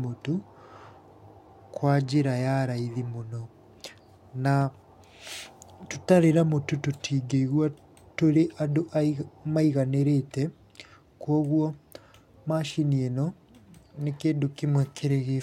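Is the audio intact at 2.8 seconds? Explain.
Yes, the speech at 2.8 seconds plays through intact, with no audible technical fault at that moment.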